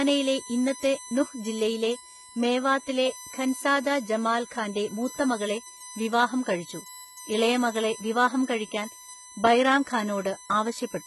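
A speech recording with a steady, fixed-pitch whine throughout: a 1 kHz tone and its harmonics, loudest at 6 kHz, sitting about 15 dB below the voice. It is USB whine, the bus's 1 ms frame current leaking in through power or ground. The treble also sounds gritty and metallic, with nothing above 11.8 kHz, likely from heavy HE-AAC compression whose band replication rebuilds the top end from lower bands, which fits a bitrate around 16 kbps.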